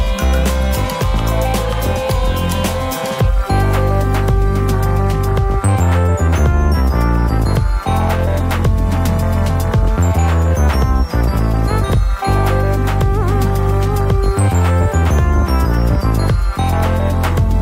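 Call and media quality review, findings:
No faults found on listening. No ticket action needed for this recording.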